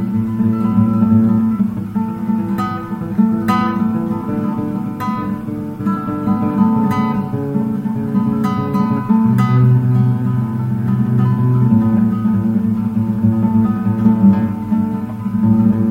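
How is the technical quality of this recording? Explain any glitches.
No glitches or technical faults can be heard here.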